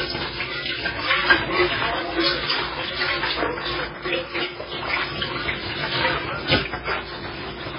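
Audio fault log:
Throughout, MP3 compression: the audio has nothing above 5.3 kHz and a heavily watery, swirling texture, with metallic chirps on bright detail and smeared attacks. This is likely MP3 coding at a very low bitrate, which fits about 16 kbps. Starved of bits, the encoder cuts the treble at a fixed point and drops weak frequency lines, which switch on and off from frame to frame and produce the swirl and chirps.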